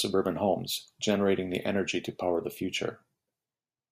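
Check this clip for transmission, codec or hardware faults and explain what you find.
Nothing turned up here, since the speech comes through without any transmission, codec or hardware problem to point to.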